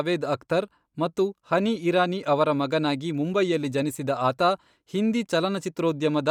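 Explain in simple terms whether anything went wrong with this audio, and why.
Yes, something's off, and it runs through the whole recording. The speech has a breathy, grainy edge, and that roughness is easy to hear. The likely culprit is Bluetooth LC3 compression. To save data, the codec chops sound into short slices, which fits 10 ms frames here. It then throws away much of the fine high-end detail and fills the gap with noise. The top of the range still reaches about 20.3 kHz, so it doesn't sound muffled.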